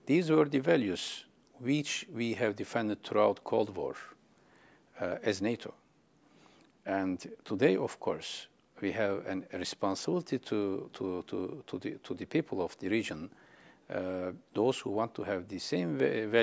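Nothing here gives any trouble: the sound runs along steadily without a single technical fault to point out.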